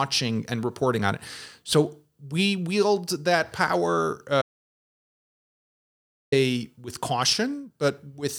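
At 4.42 s, after "we wield that power", an audio dropout to silence cuts the speech mid-flow for 1.9 s until 6.32 s, likely a lost input. Unlike a pause, no room tone remains.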